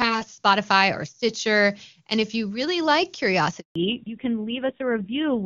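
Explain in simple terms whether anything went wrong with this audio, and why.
At 3.60 s, right after "if you really like", the phone switched the call from one network to another, and for a moment no speech reached the other end. This is a handover gap: the voice fades out almost at once and there is 160 ms of silence until the new connection picks up. Whatever was said during that instant is simply missing, so a small piece of the sentence drops out.

From 3.76 s to the end, the call no longer runs in HD Voice. The new connection fell back to an older, basic phone codec, a fallback to narrowband. Before the switch, the HD Voice codec carried the higher, crisper parts of the voice. Afterwards, nothing above 4 kHz gets through, so the voice loses its brightness and clarity. It sounds duller and muffled, with a rougher edge.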